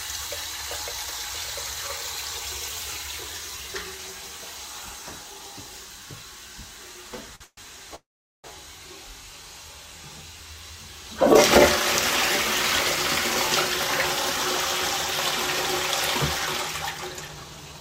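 At 7.35 s the sound briefly hangs for about 50 ms, through 7.42 s. This is a short stall from a late packet. The next packet missed its playout time, the jitter buffer emptied, and the receiver stretched the last fragment of sound until the data arrived. Playback then resumed at the same point, so nothing is lost, but the held sound carries a faint buzzy smear and everything after it runs 50 ms later.

Right after that, from 7.44 to 7.59 s, there is a call audio freeze. The last sound is drawn out for about 129 ms as a fading buzz, and the final 50 ms of that is silence. The likely cause is packets held up in transit, which drained the jitter buffer again. A longer call audio freeze runs from 7.95 to 8.46 s. Here the fill lasts 486 ms, a brief decaying tail followed by about 410 ms of silence, and this was likely also caused by delayed packets. In both freezes the audio picks up where it stopped, so gaps are inserted and the delay grows.

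From 16.91 to 17.80 s there is a jitter buffer speed-up. With surplus audio queued, the receiver trimmed many tiny pitch-period slices, roughly 150 ms in total. The sound plays at 116% speed with unchanged pitch and comes across as rushed.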